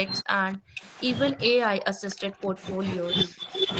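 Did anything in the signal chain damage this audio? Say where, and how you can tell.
Yes. The call's echo canceller, likely confused when both ends talked at once, produced speech suppressed in double talk. The speech dips by about 40 dB between 0.07 and 0.82 s, about 35 dB between 1.31 and 2.57 s, and about 10 dB between 3.06 and 3.43 s.

The same call processing at the loudspeaker end also shows echo leak: its canceller likely failed to remove all of the returned signal. A faint copy of the speech, delayed by 254 ms, is audible at 2.10–2.15 s and 2.58–2.69 s (about 20 dB down), and at 2.96–3.02 s and 3.25–3.47 s (about 15 dB down).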